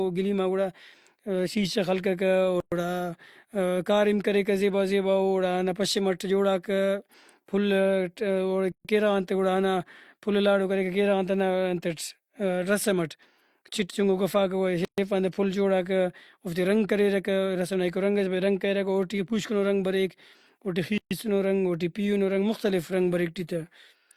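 Silences break the speech every 6.0 s: at 2.60 s (about 116 ms), 8.72 s before "کیرغان تے گڑاہندا پھل", 14.85 s after "چِٹ چُنکو گوفاکہ گڑا", and 20.98 s (each about 130 ms). Each is a gap at a join of encoded pieces. Untrimmed encoder delay and end padding leave holes whose edges the codec smears. The speech then resumes where it stopped.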